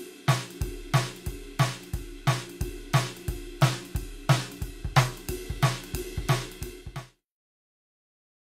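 No technical faults can be heard in this music. Near the end the level fades out smoothly, beginning at about six and a half seconds and reaching silence at 7.27 s without any click or hard edge.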